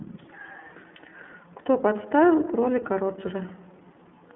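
From start to finish the speech runs through an iLBC codec, and the damage is plainly audible. Everything sits inside a phone-line band of roughly 200 Hz to 3.4 kHz, so there's no air or sibilant sparkle up top. Each 30 ms frame has its excitation coded on its own, which leaves the voice clear but slightly rough and synthetic, and that frame size fits iLBC's lower-rate mode at around 13 kbps.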